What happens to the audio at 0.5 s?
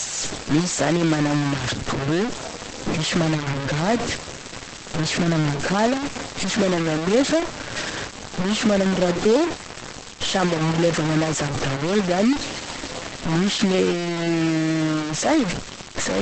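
At 0.5 s, as throughout the recording, the sample values have been truncated to very few levels with no dither, which fits about 3 bits. This is low bit depth without dither, and it is the likely cause of the sound. Because the rounding error follows the speech, it is nearly as loud as the speech itself. The voice turns coarse and gritty, and the quietest parts sputter between steps or drop out.

Also present from start to finish is Opus compression. The sound points to a low rate of around 12 kbps with the encoder in its SILK speech mode, and this is likely what caused it. Nothing is left above 8.5 kHz. The codec damage is heavy, so the speech sounds muffled and hoarse, and the coding roughness is layered over the grain from the truncation.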